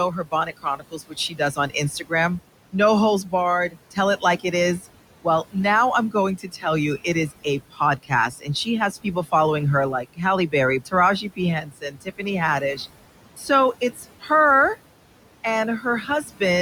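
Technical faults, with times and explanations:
Throughout: noise suppressor artifacts. The suppressor cuts what it judges to be steady noise by about 18 dB, frame by frame. The room noise, about 16 dB below the speech, sinks in the pauses and rises under speech.
0.11–2.12 s, 2.73–5.55 s, 6.11–9.33 s, 10.03–12.79 s, 13.37–14.3 s, 15.81–16.41 s: speech cut by the noise suppressor. The suppressor treats quiet parts of the speech as noise and lowers them with the background. Drops reach about 18 dB early and about 7 dB in the last span. Soft sounds and endings come out swallowed, roughly a second's worth in the first span.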